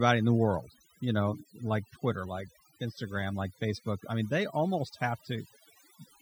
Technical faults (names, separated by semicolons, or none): overdone noise removal